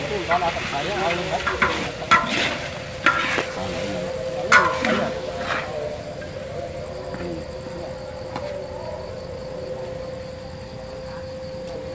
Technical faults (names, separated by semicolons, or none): skip ahead; jitter buffer speed-up